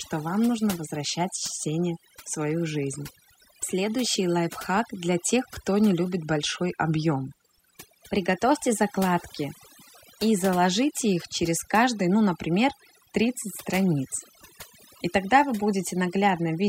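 Overdone noise removal runs through the whole recording, from the first second to the last. A noise reduction stage was pushed too hard, so any frequency band whose level sits close to its noise estimate gets pulled far down or switched off entirely. The quieter components of the speech are caught along with the noise. Between phrases the background drops to near silence scattered with twinkling specks.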